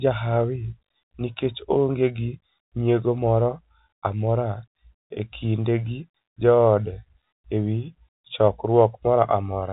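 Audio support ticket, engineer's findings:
No faults found in the speech; the band stops near 3.8 kHz as expected of G.711 mu-law telephone coding, with only faint coding noise, if any.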